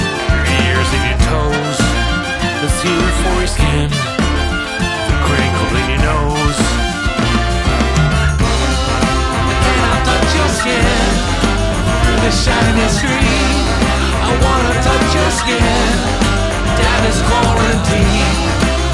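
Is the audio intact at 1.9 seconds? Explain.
Yes, at 1.9 seconds the audio is intact, with no dropout, click, distortion or other fault at that moment.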